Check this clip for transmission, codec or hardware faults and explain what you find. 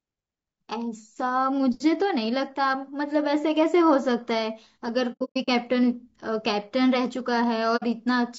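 Two faults are present: low-bitrate low-delay coding throughout, and two episodes of lost frames muted by the decoder.

Low-delay AAC compression runs through the whole speech clip, likely AAC-ELD at a bitrate around 32 kbps. Its short transform frames resolve the pitch harmonics poorly, and at this rate there are too few bits to code them cleanly. The voice sounds plainly rough and grainy, with noise filling the gaps between harmonics and a thin, synthetic-sounding top band.

AAC frame loss with muting first occurs between 5.12 and 5.49 s. Frames failed to arrive, and the decoder zeroed their spectrum. About 270 ms of audio is missing, scattered across roughly 360 ms, which fits about nine lost frames of about 30 ms. The longest gap lasts around a tenth of a second. Because the overlapping windows fade the signal out and back in, the result is a stuttering series of soft-edged dropouts.

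The same fault returns from 7.76 to 7.84 s. This gap is shorter, about 60 ms of silence, which fits two lost frames. Again the windowed fade leaves a brief, soft hole in the speech.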